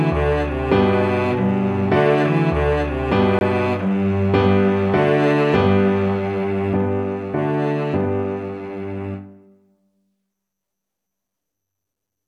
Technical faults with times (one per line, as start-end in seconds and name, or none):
3.39-3.41 Bluetooth stall